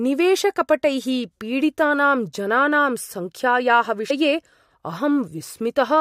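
At 2.32 s the speech hops forward by something like 20 ms, and around 4.10 to 4.12 s it does it again, this time losing roughly 70 ms. That's compressed frames skipped: whole blocks of the encoded audio never got played, whether they were missing or the decoder rejected them as damaged. You get a short skip where the speech jumps ahead.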